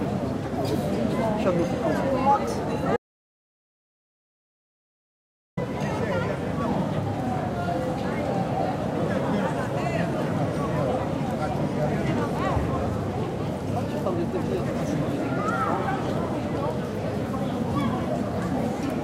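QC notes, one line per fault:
2.97–5.57 s, audio dropout to silence: sound cuts off mid-flow for 2.6 s with no room tone, likely lost input while recording continued; waveform flattens, spectrogram shows a blank gap.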